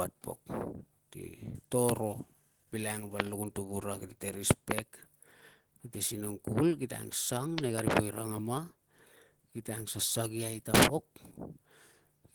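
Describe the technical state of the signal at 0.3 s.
At 0.3 s the signal carries damage that runs through the whole clip, most likely from Opus compression at a low rate, which fits roughly 16 kbps with the encoder in its hybrid speech mode. With too few bits, the coder rebuilds bands coarsely instead of leaving gaps, so the speech sounds plainly rough, grainy and hoarse rather than swirly. The bandwidth stays wide, with content reaching about 20.1 kHz.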